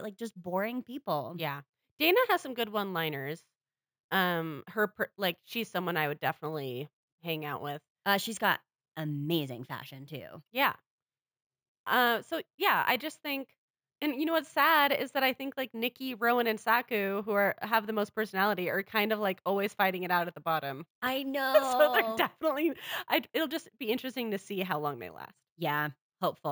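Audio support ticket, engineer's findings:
Imaging from sample-and-hold upsampling, entire clip. Bright metallic fizz over the speech, following its level. Mirror band 8 to 16 kHz, about 18 dB below signal. Fits a 16 kHz source raised to 48 kHz by repeating samples, no smoothing filter.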